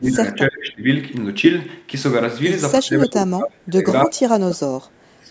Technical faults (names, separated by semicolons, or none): speech suppressed in double talk